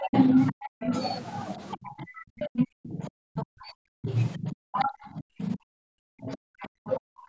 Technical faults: speech suppressed in double talk; other side's voice leaking through

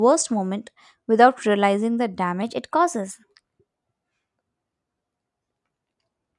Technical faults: wrong sample rate

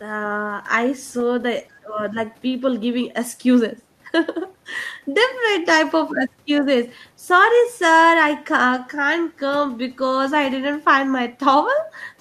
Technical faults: speech suppressed in double talk

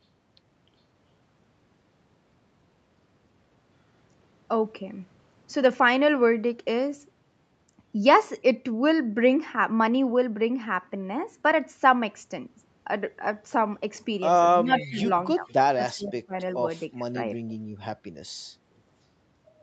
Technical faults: speech suppressed in double talk; echo leak

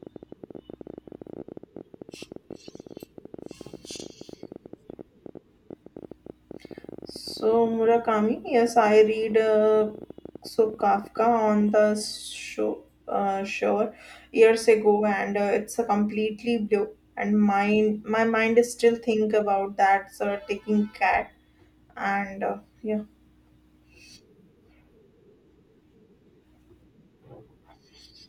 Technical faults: train of clicks

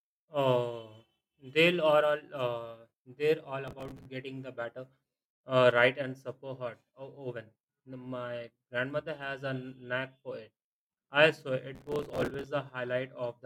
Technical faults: processor overload crackle

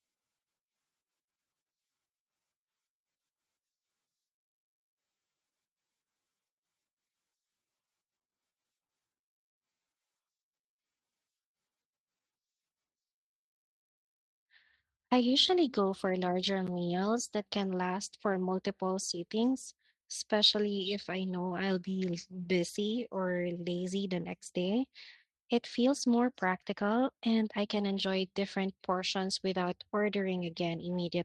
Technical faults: repeated stalls (stutter); jitter buffer slow-down; jitter buffer speed-up

